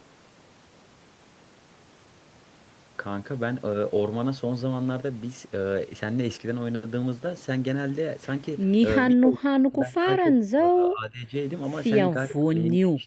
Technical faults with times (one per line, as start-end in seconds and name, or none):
9.08-11.34 speech suppressed in double talk
12.09-13.06 speech suppressed in double talk